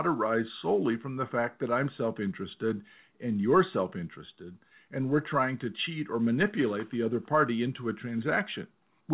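No technical faults are audible.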